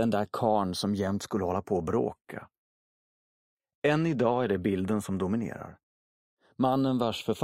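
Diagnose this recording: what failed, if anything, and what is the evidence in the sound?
The converter stage failed: the two channels were clocked by separate devices, so they are drifting apart throughout. The delay between them slides to about 0.3 ms by the end, which points to a clock mismatch on the order of 70 ppm. Summed to mono, this gives a slow flanging sweep. On a spectrogram, comb notches glide steadily across frequency over the whole clip.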